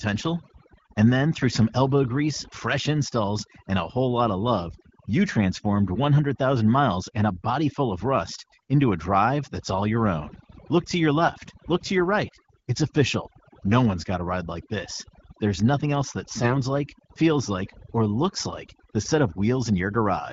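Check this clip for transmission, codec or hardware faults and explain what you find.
Two problems stand out: heavy-handed noise suppression across the whole clip and two short bursts of AMR bit errors.

The overdone noise removal runs from start to finish. The suppressor was pushed hard enough that it cuts individual frequency bands almost to nothing whenever they sit close to what it thinks the noise floor is, and the softer parts of the speech get caught along with the hiss. So the gaps fall to near silence dotted with little twinkling specks.

The AMR bit errors hit at 11.22 to 11.30 s and again at 16.42 to 16.61 s. In those spots some of the weakly protected bits in the frames got flipped on the link while the check on the critical bits still passed, so the decoder used them anyway. The first burst looks like roughly one bad bit in twenty, the second a bit lighter. The excitation pulses end up misplaced and the fine gain and spectral values drift, so the voice holds its pitch and level but goes briefly hoarse, scratchy and gargly. 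The lengths fit about four and eight damaged 20 ms frames. The wideband codec underneath sounds like the 12.65 kbit/s mode, with only light coding roughness.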